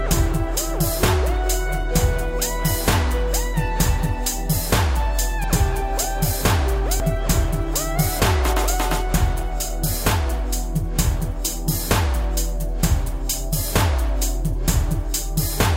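At 5.44 s the audio jumps abruptly forward, with no gap of silence, and at 7.0 s it skips ahead again in the same way. Each jump removes a short stretch of sound: roughly a tenth of a second at the first point and somewhat less at the second. The likely cause is a dropped buffer (overrun), where the recording software failed to collect its samples before the hardware overwrote them, so the audio on either side of the lost piece is spliced directly together.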